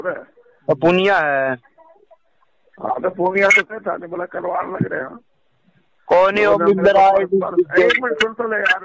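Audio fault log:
No audio fault to log.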